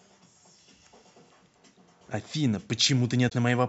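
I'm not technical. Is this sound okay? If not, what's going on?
No. A likely broken MP3 bit reservoir: some compressed data went missing, so at 3.28 to 3.32 s the sound skips ahead with a brief glitch.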